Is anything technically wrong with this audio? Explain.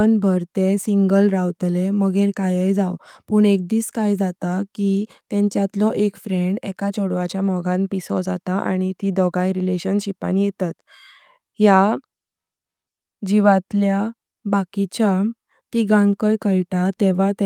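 No, nothing technically wrong stood out on listening to this speech recording.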